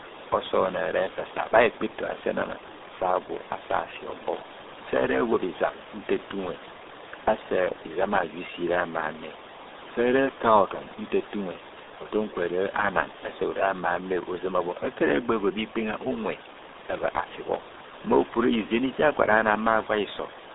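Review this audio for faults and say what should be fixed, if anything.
RealAudio 14.4 codec, throughout the clip: the speech is squeezed into a narrow line band of roughly 250 Hz to 3.7 kHz, with nothing above 3.8 kHz, and heavy coding damage leaves it muffled and gargly, consistent with an 8 kbit/s dial-up-era speech coder. The room noise, sitting about 15 dB below the speech, is smeared into the same murky band. To prevent this, send or archive the recording through a modern wideband codec at an adequate bitrate rather than this legacy low-rate format.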